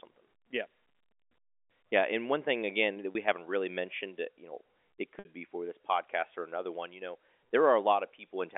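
Packet loss with pitch repetition occurs twice. The receiver fills each gap by repeating the last pitch cycle. After "one thing again that", a 30 ms gap at 3.12 s, which fits one packet, sounds like a briefly held buzz. After "mentioned you know it", a 60 ms gap at 5.19 to 5.25 s, which fits two packets, fades toward silence before "be for this podcast" cross-fades back in on the narrow G.711 telephone line.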